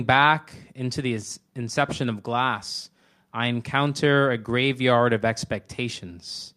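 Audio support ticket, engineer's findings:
Checked the speech recording by ear and found nothing wrong on our side, so no fault to log here.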